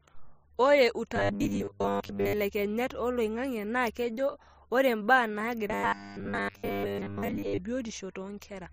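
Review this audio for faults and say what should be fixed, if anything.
Robotic sound from repeated short buffers spans 1.16–2.33 s and 5.68–7.61 s (after "naa kejo re mbaa"). Most audio is replaced by a looping 10 ms slice, likely from starved buffering, giving a fixed 100 Hz buzz; unlike a pitch shift, that tone never moves with the voice. Give the audio buffers more headroom so fresh audio arrives in time.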